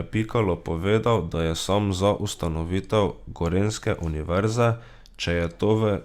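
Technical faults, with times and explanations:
No technical faults can be heard in this speech recording, and the signal holds steady with no breaks, dropouts or glitches anywhere in it.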